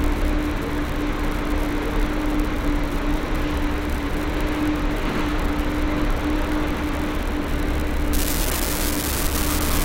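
From 8.13 s to the end, an unreliable data bit flips at random, adding a steady crackle; the waveform shows equal-height spikes, and the spectrogram shows broadband speckle even in pauses.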